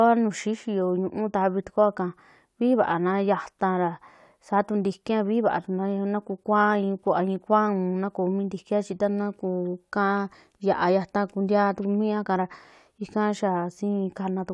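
Nothing in the recording stood out as a technical problem on listening.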